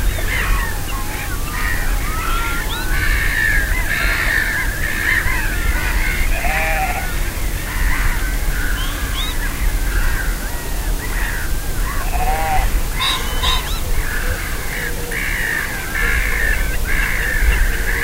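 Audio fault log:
No audible faults detected.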